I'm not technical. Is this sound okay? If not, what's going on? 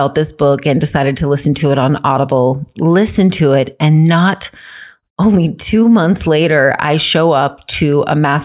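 Yes, nothing in this speech recording points to a technical fault, so there's nothing to fix.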